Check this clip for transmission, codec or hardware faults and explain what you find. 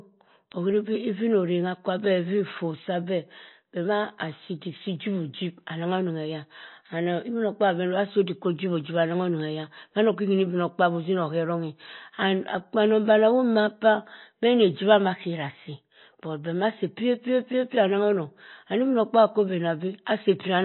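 Two faults are present: codec damage across the whole clip and a steady train of clock ticks.

Throughout, the speech has watery, swirly artefacts, and the spectrum stops dead at 4 kHz. The cause is likely MP3 compression at a low bitrate, around 24 kbps. Starved of bits, the encoder drops weak frequency lines, which flicker on and off between frames, and cuts the treble at a fixed point. On a spectrogram this shows as a hard ceiling at 4 kHz with patchy, blocky gaps below it.

From 0.52 s to 20.27 s there are word clock ticks, sharp clicks of uneven strength about every half second, roughly forty in all. The receiving device runs on its own clock rather than locking to the sender's, and the two drift apart by about 50 ppm. Each time they slip, one sample is dropped or repeated. A waveform shows a single-sample discontinuity at each tick, and a spectrogram shows evenly spaced thin vertical lines.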